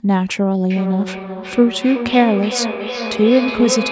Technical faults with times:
0.70-3.92 feedback echo between two devices

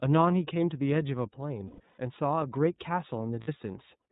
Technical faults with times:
0.00-4.12 iLBC codec
1.68-1.98 lost iLBC frames
3.41-3.49 lost iLBC frames

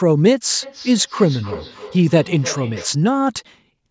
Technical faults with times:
0.63-3.01 feedback echo between two devices

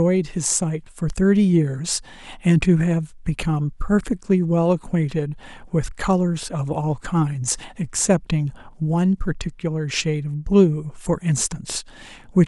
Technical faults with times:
none

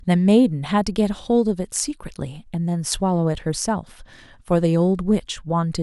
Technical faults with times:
none

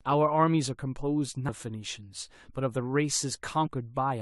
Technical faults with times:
1.47 compressed frames skipped
3.66-3.68 compressed frames skipped

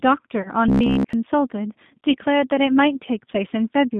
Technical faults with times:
0.00-4.00 G.729 codec
0.42-0.50 VoIP packet loss concealed by the speech codec
0.68-1.13 robotic sound from repeated short buffers
2.11-2.17 VoIP packet loss concealed by the speech codec

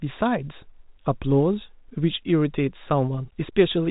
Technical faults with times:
none

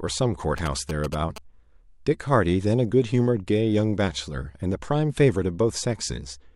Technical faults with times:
0.58-1.38 GSM signalling bursts

